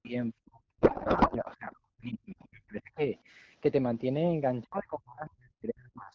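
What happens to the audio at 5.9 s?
At 5.9 s the speech is cut, by as much as around 40 dB at its deepest. It's likely speech suppressed in double talk, from 4.63 s to the end. The echo canceller mistakes the talker for echo and turns it down.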